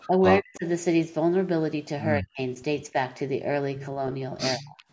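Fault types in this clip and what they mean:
Speech suppressed in double talk: the voice is abruptly pushed down in four places, likely because an echo canceller heard both ends talking at once and attenuated the near talker as if it were echo. A shallow dip near 0.07 s precedes deep, near-total gaps at 0.41–0.66 s, 2.21–2.39 s and 4.57–4.77 s. The waveform shows sudden notches in the envelope, and the spectrogram shows matching vertical bands fading across the full range up to the 8 kHz call-path ceiling.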